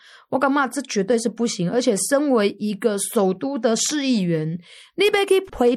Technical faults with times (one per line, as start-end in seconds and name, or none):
0.00-5.76 MP3 compression
0.58 corrupt frame decoded